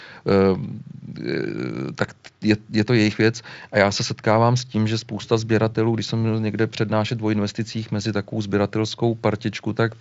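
No technical faults are audible.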